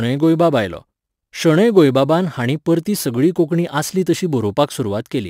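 Crude rate conversion runs through the whole clip. The sample rate appears to have been raised by a modest ratio, consistent with 44.1 kHz to 48 kHz, by repeating the nearest existing sample rather than filtering. The repeats fall in a fixed pattern set by the two rates, producing shifted, inharmonic copies of the speech. They sit at roughly 30 dB below the speech and are heard as a gritty fizz that rides on louder and brighter syllables.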